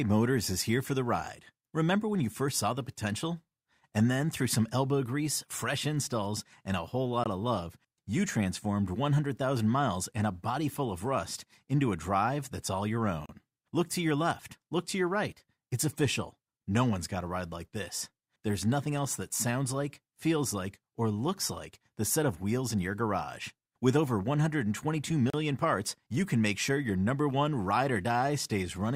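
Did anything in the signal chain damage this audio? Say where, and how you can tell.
Yes: gaps between stream segments at 7.24, 13.26, 19.29 and 25.30 s, during playback. Hard-edged silences of 9 to 35 ms recur every 6 s where segment timestamps fail to meet.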